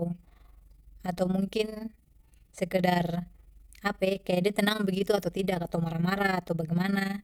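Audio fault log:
Throughout: overlap-add ripple. The speech carries a rough tremolo at around 20 Hz, its level swinging by about 11 dB once per frame. Windowed frames were rejoined with an overlap whose gains do not sum to a constant, so loudness dips and recovers every frame.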